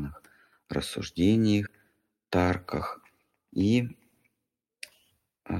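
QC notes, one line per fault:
1.65 s, compressed frames skipped: the sound jumps ahead by roughly 100 ms, which fits about five missing 23.2 ms frames. The join shows as a brief discontinuity in the waveform and a vertical seam on the spectrogram.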